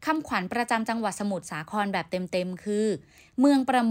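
A speech clip received over a digital link by a device running on its own clock rather than locked to the sender's, causing word clock ticks. The two clocks drift apart at a rate that points to an error of around 50 parts per million, so a single sample is dropped or repeated each time they slip. From 0.16 s to the end, this produces about ten sharp ticks of uneven strength, roughly every 0.4 s.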